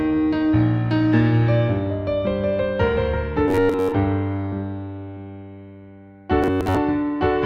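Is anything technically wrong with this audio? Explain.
Yes. Robotic sound from repeated short buffers affects the music from 3.48 to 3.92 s and again from 6.43 to 6.77 s. The music turns into a rigid, metallic buzz near 93.8 Hz that still loosely follows its original contour. The likely cause is audio arriving too seldom, so a chunk of roughly 10.7 ms gets looped for most of each stretch. On a waveform this shows as an identical short cycle tiled end to end, and on a spectrogram as evenly spaced harmonic lines at multiples of 93.8 Hz.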